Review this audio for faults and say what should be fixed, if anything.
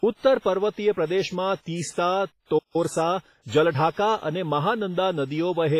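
Throughout, the speech rings and smears, with hiss that swells and fades with the speech and nothing above 15.4 kHz. This is heavy WMA compression, likely near 24 kbps.

From 2.58 to 2.76 s the speech halts mid-flow for about 0.16 s, a playback stall, likely from the player running out of data or being blocked.

From 2.76 to 3.80 s the speech is hurried at 1.15 times normal speed with unchanged pitch. This is time-compressed catch-up, trimming the backlog with cross-faded cuts.

To prevent these, encode at a higher bitrate or with a better codec, and give the player a larger buffer so it neither stalls nor needs to catch up.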